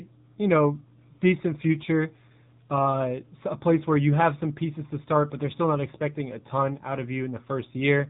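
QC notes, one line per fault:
Throughout: AMR narrowband mobile codec. The speech has nothing above about 3.8 kHz, so it sounds thin and telephone-like, with no sibilant sparkle. The codec keeps only a model of the vocal tract, excited by a few pulses in each short block of every 20 ms frame. The damage is plainly audible as a buzzy, synthetic edge on the voice. This points to a low AMR-NB mode of about 7.4 kbps.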